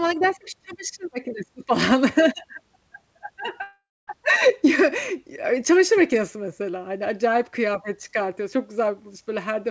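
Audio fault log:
3.62–4.09 s, long network dropout: the last sound is stretched into a fading buzz, then about 0.24 s of near-silence, and speech resumes with 0.46 s missing, likely from lost packets. Spectrogram: smeared bands dissolving into a blank gap. Waveform: tapering to flat.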